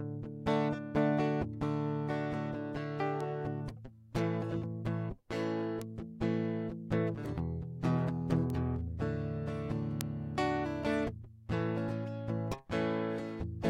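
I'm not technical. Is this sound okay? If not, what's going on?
No. A single bit in the digital music data got flipped, a bit error spike, making one to three samples jump and snap back. You hear a sharp, brief tick at 3.21, 5.82, 7.26, 8.50 and 10.01 seconds, loudest at 10.01.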